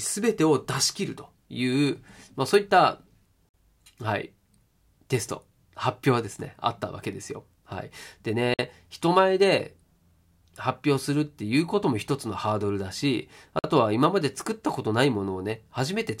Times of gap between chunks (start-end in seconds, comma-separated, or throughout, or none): 3.49-3.54, 8.54-8.59, 13.59-13.64